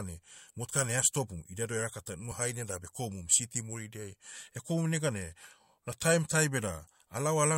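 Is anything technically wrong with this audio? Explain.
Yes, there is one fault: a dropped buffer (overrun) in the speech at 3.40 s, just after "haine da bekomum". It is heard as a small jump in the audio, with no gap of silence. The likely cause is that the recording software failed to read its input buffer before the hardware overwrote it, so around 5 ms of audio was lost and the surrounding material was spliced directly together.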